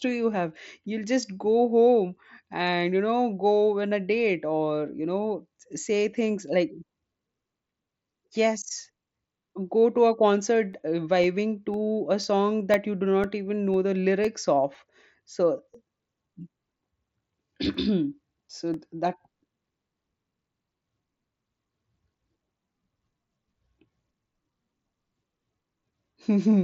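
From 10.73 s, just after "go to a concert", to 26.24 s, periodic USB or driver dropouts blank roughly a millisecond to silence every 0.5 s, around thirty ticks. A recurring bus or driver stall causes them. Their clockwork spacing, heard only under speech, sets them apart from random packet loss.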